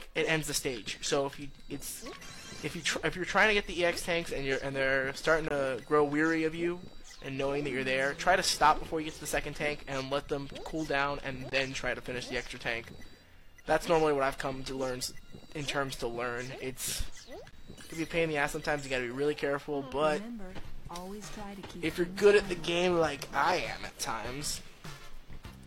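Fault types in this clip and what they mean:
Gap between stream segments: the 6 s segments don't quite line up in time, so the player pads each seam with silence. That gives short, hard-edged dropouts of about 17 to 23 ms at 5.48, 11.50 and 17.51 s, evenly spaced, with no audio actually lost.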